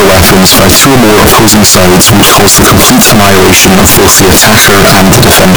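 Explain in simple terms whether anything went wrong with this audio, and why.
From start to finish the speech comes out as a wall of loud, harsh, crackling distortion, and even the pauses between phrases are as loud as the talking. That's the classic sound of signed and unsigned mixed up, likely on 16-bit samples: the top bit of every sample gets flipped, so each time the waveform should pass gently through zero it jumps across the entire range instead, turning quiet moments into loud noise.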